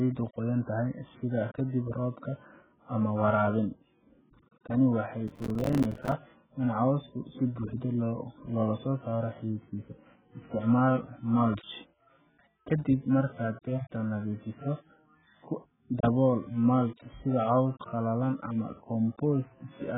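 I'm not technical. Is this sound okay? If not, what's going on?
No, not really. The whole recording sounds dull and muffled, with nothing above 3.8 kHz, which is likely heavy AAC compression squeezing the speech into a very small file. From 5.28 to 6.12 s there's processor overload crackle: the computer kept falling behind, dropping dozens of tiny slivers of silence that add up to a gritty tearing sound.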